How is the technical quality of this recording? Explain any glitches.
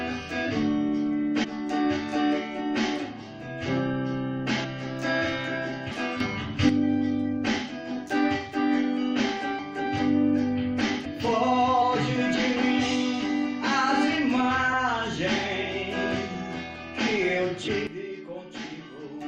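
The recording has two recurring glitches: skipped audio frames and abrupt level jumps.

Compressed frames skipped at 1.43, 5.90, 9.58, 11.04, 11.81 and 14.72 s: missing or rejected frames make the sound leap ahead by a tenth to half a second.

Sudden gain jump from 6.20 to 6.69 s, about +8 dB, and from 17.87 s to the end, about −10 dB: sound and noise shift level together, likely from an unramped gain change.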